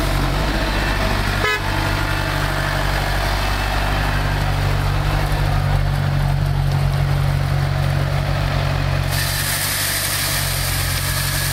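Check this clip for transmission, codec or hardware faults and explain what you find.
One hardware fault is present: periodic USB or driver dropouts, from about 0.41 s to 10.41 s, repeating every 2.0 s. Each time, roughly 2 ms of audio is skipped outright when something stalls the USB bus or audio driver on a fixed schedule, so the waveform jumps and leaves a small tick. Random packet loss would scatter its gaps unevenly, while these clicks keep strict two-second spacing and sound only while signal is present.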